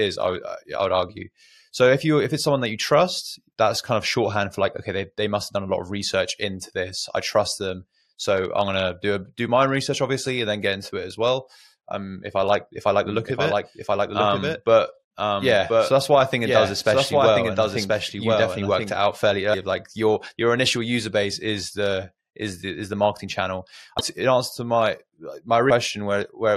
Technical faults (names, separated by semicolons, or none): doubled audio track; damaged data in a compressed stream